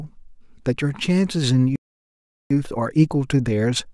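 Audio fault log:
1.76–2.51 s playback stall: the speech cuts off mid-flow and the output falls completely silent for about 0.75 s before resuming. This is likely the player running dry of buffered data or having its audio thread blocked until it recovered.
2.51–3.94 s time-compressed catch-up: from the restart to the end, the speech runs about 1.1 times faster at unchanged pitch. The player is trimming its backlog by removing small slices and cross-fading across the joins.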